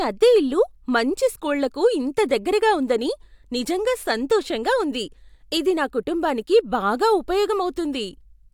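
A speech recording with no technical faults to point to: nothing in the signal breaks, drops out or distorts at any moment.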